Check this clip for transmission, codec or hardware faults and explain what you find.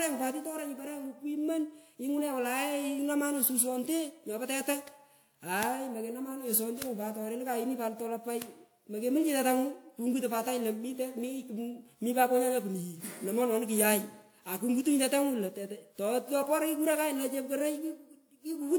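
One codec fault runs throughout this speech: generation loss. The smeared, swirly, hollow sound likely comes from about seven lossy passes, probably WMA 1 near 128 kbit/s. Requantising on shifting frame grids compounds noise and blurs attacks. One encode at that rate wouldn't sound this degraded, and the content extends to 20.1 kHz.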